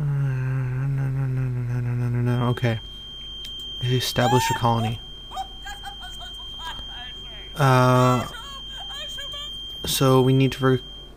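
From 2.23 s to the end, a thin, steady whistle near 3.2 kHz sits behind the sound, roughly 15 dB below it. It swells and fades slowly in level. This is a feedback whistle. The likely cause is a speaker-to-microphone loop held just at the edge of feedback.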